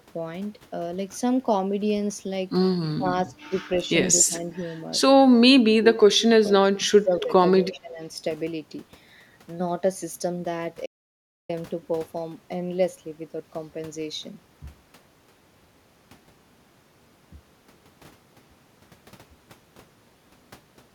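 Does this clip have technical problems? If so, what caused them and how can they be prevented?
Yes. Speech suppressed in double talk is the likely cause of dips at 2.93–3.06, 3.25–3.5, 4.24–4.43, 5.34–6.17, 6.51–7.32 and 7.62–8.0 s. With both sides talking at once, an echo canceller couldn't separate this talker from loudspeaker echo and attenuated everything. The speech sinks by roughly 15 to 30 dB, the longer stretches nearly vanishing. A better double-talk detector, or a headset on this talker's side, would prevent this.

An echo leak, a brief delayed copy of the speech about 264 ms late and about 25 dB below it, appears at 7.73–7.77 s. A loudspeaker's echo canceller likely let residual pickup through, and it was sent back. Using headphones, or giving the canceller time to converge, would prevent it.

An audio dropout to silence cuts the sound from 10.86 to 11.49 s, leaving about 0.63 s of total silence with no room tone, so whatever was said there is lost. 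The input was likely interrupted by a disconnect, link failure or mute while recording continued writing silence. Securing connections and monitoring input levels would prevent this.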